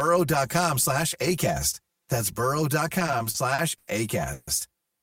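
Throughout the speech a hollow, phasey colouring sits on everything, with fixed notches carved evenly across the spectrum. This is channel delay (comb filtering): one channel trails the other by roughly 5 ms, and when the two are folded to mono, content common to both cancels where the offset puts them out of phase, starting around 100 Hz and repeating at regular intervals above it.

From 0.55 to 0.66 s a short, ragged burst of crackle and scratching breaks through. That is loose connector crackle: a worn or dirty contact making and breaking rapidly, chopping the signal into fragments. It lasts only about a tenth of a second.

Between 2.99 and 3.89 s the speech drags and stutters, catching eight times as the last sound is held and extended, adding about 220 ms in total, with the longest hold about 90 ms. Roughly a quarter of that stretch is filled-in sound. These are repeated stalls (stutter): audio kept arriving late, the receive buffer ran dry again and again, and each time the receiver stretched the last fragment until it could continue, so nothing is lost, only delayed.

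At 4.33 to 4.49 s the speech halts for about 140 ms and the final sound is drawn out as a fading buzz or hiss rather than dropping to silence, then picks up exactly where it stopped. This call audio freeze likely comes from a burst of delay in delivery that emptied the buffer, forcing the receiver to sustain the last sound until the held-up audio arrived.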